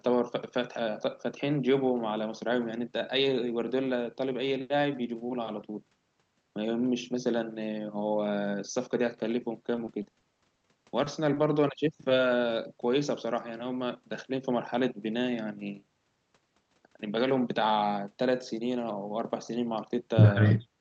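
From 9.75 to 10.67 s the speech turns choppy and robotic: repeated packet loss (robotic sound). Several gaps, none longer than 20 ms, were patched by extending the preceding audio, about 130 ms filled in total. A spectrogram shows smeared, repeated harmonic slices and broken onsets.

At 11.04 to 11.08 s and again at 11.34 to 11.38 s, short concealed packet loss leaves a brief smear: 20 ms of missing signal was bridged with continued sound. The waveform shows a slightly too-regular stretch, and the spectrogram a faint blur, against the call path's normal cutoff at 8 kHz.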